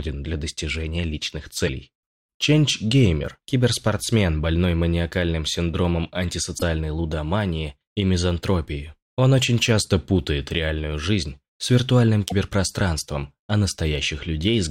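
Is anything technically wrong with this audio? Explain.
Yes. There are three brief glitches, at 1.66 to 1.69 s, 6.57 to 6.63 s and 12.29 to 12.32 s. Each time the audio skips forward and a short damaged patch follows. The likely cause is a broken MP3 bit reservoir. Frames have been lost, and the next frame reaches back for data it stored earlier. It reads someone else's bytes instead. Each glitch spans roughly one or two 26 ms frames.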